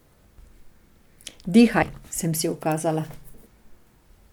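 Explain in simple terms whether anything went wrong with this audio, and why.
Something did go wrong, in the compressed data that carries this speech. At about 1.81 s, a small piece of the compressed stream was damaged: some of its bytes were lost or overwritten. The decoder, the part that turns that data back into sound, couldn't read that stretch properly, lost its place, and had to hunt for the next clean starting point. That stumble comes through as a brief chirp or blip, over in a split second.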